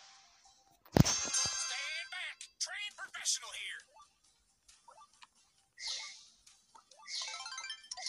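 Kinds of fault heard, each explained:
Loose connector crackle: a worn or dirty contact somewhere in the chain kept making and breaking as it shifted, chopping the signal on and off. Here it's a short, ragged burst of scratchy crackle from about 3.05 to 3.20 s, lasting roughly 0.15 s.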